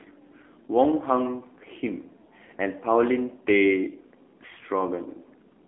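AMR narrowband mobile codec damage runs through the whole clip. The speech is band-limited to about 250 Hz to 3.6 kHz, with nothing above 3.8 kHz, and the pulse-driven vocal-tract model leaves it plainly buzzy and synthetic, which fits a low rate near 7.4 kbps.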